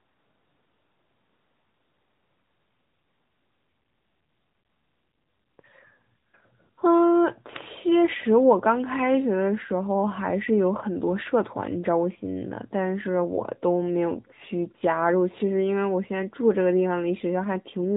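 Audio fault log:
Throughout: AMR narrowband mobile codec. Nothing passes above 3.8 kHz, confining the speech to the narrow telephone band. The codec rebuilds it from a pulse-driven vocal-tract model, which gives a plainly audible buzzy, synthetic edge that fits a mid-range AMR-NB rate near 10 kbps.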